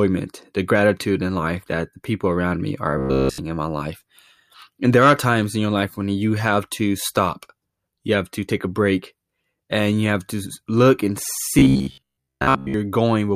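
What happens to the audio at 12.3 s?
The speech turns into a rigid metallic buzz near 67 Hz from 11.59 to 12.74 s, right after "have to look and": robotic sound from repeated short buffers, likely a 15 ms chunk repeated for most of that stretch.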